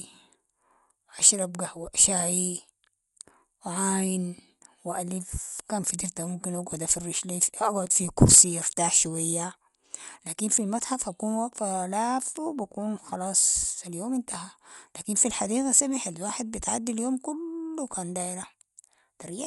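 Throughout the speech, the sound is dull, with nothing above 11.4 kHz, and a rough, fluttering noise around tones. Likely Dolby Digital compression at a starved rate, consistent with 64 kbps: bands left without mantissa bits are refilled with decoder noise.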